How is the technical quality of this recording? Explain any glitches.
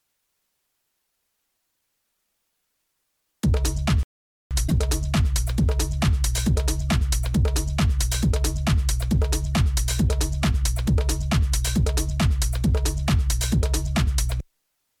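The recording has two glitches close together, a playback stall and then a burst of damaged data in a compressed stream; both are faults in delivery or decoding rather than in the original audio.

From 4.03 to 4.51 s the output drops to silence for about 478 ms and then resumes. This is a playback stall, likely caused by the player running short of buffered data or by its thread being held up. Unlike a dropout from damaged data, the gap is clean silence with no chirp or garble at either edge.

From 4.64 to 4.72 s a short glitch appears in the sound. This is damaged data in a compressed stream: the decoder misread corrupted frames, lost sync and skipped ahead to the next valid frame header. A stall only pauses, whereas this corruption produces audible artefacts.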